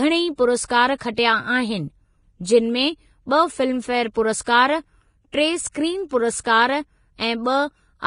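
Throughout the speech, nothing sounds above about 10.5 kHz, and the remaining treble is hissy and grainy, with roughened tones. This points to heavy Vorbis compression, likely at a bitrate near 30 kbps. Unlike broadband background noise, the grit follows the signal: coarse quantisation turns fine detail into noise of similar energy.

Pre-echo comes at 1.14 to 1.18 s, 4.44 to 4.46 s and 5.72 to 5.75 s. A short hiss of 35, 24 and 29 ms leads into each sharp attack, because quantisation noise sized for the loud onset spreads across its whole transform block. Unlike a click, it swells before the onset rather than landing on it.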